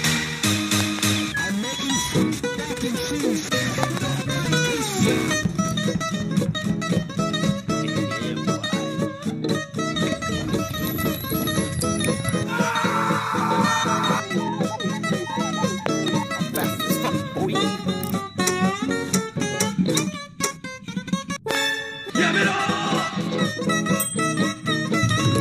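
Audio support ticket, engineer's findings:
Loud pop, double each time, at 0.81–1.01 s, 3.83–3.99 s, 15.86–16.10 s, 21.51–21.57 s; about 20 dB above sound. Likely switching or static transient. Waveform spikes, spectrogram vertical broadband stripes.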